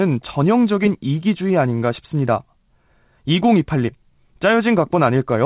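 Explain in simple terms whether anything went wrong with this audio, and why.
Nothing went wrong with this recording of speech. It has the narrow, thin sound of an ordinary landline call, because telephone coding keeps only the sound below about 4 kHz, and that coding is doing exactly what it should.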